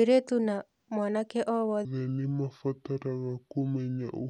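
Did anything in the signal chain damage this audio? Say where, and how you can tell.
Yes. There is a section at the wrong speed from 1.85 s to the end of the clip. At 1.85 s the speech abruptly drops to about 0.64 times its original speed, so it drags and the pitch falls by roughly seven semitones, turning deep and slow. Speed and pitch shift together at one instant. This most likely happened at the editing or playback stage, where that portion was clocked against the wrong rate.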